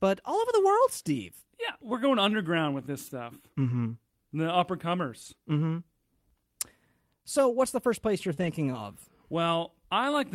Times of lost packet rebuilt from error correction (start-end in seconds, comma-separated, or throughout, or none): 5.21-5.27, 8.37-8.52